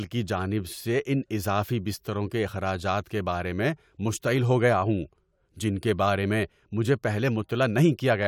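Nothing stood out as a technical fault anywhere in this speech recording on listening.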